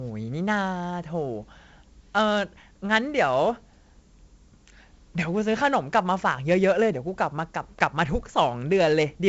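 From start to finish the speech carries 4-bit ADPCM compression, and the damage is heavy. Each sample is coded as a coarse step from a predicted value, so a gritty hiss rides on every loud syllable and sharp onsets smear where the step size lags. Nothing reaches above about 7.8 kHz, which fits a 16 kHz sample rate at 64 kbps and dulls the top end. A spectrogram shows a hard ceiling there, with broadband noise that swells and fades with the speech level.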